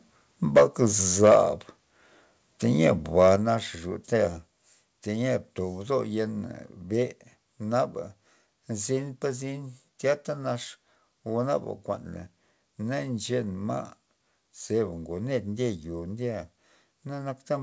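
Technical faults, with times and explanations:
0.56–1.38 s, microphone overload: the loudest syllables take on a harsh, crackling edge. The microphone input was likely set too high, so peaks ran about 8 dB past the converter's limit and had their tops sheared off. A few percent of samples sit flat at the converter's limit. On the waveform the peaks look squared off, and on the spectrogram broadband smearing appears above the voice harmonics, up to the 8 kHz ceiling of the call band.
0.58 s, microphone volume stepped down: just after the first distorted peak, voice and background both drop by about 2 dB at once. This is likely the call software reacting to the overload by cutting the device's input gain in a single step rather than fading it. The waveform envelope shows a small, sudden step down, and the spectrogram dims slightly across every frequency at that instant.
3.18–3.3 s, microphone overload: a shorter burst of the same crackle, with peaks about 3 dB over the converter's limit and a few percent of samples flattened. 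An input gain that was likely still too hot is the cause. The waveform shows flat-topped peaks, and the spectrogram shows a brief vertical haze of added high-frequency energy.
3.36 s, microphone volume stepped down: a sharper drop of about 5 dB in voice and background together, coming right after the second clipped burst. It is likely a second automatic one-step cut to the microphone's input volume. The waveform shows an abrupt narrowing of the envelope, and the spectrogram darkens evenly from low to high frequencies from that point on.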